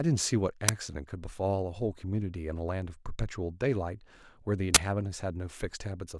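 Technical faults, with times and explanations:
0.69 s and 4.75–4.77 s, uninitialised buffer: blocks of about 5 ms and 20 ms played before audio was written to them, so stale memory came out as a loud crack and a burst of digital noise, seen as abrupt spikes on the waveform and bright broadband vertical stripes on a spectrogram.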